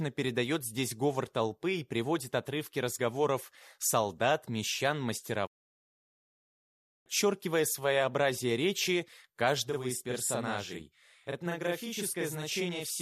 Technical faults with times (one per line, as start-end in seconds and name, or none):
5.45-7.08 digital broadcast dropout
9.70-13.01 channel delay (doubling)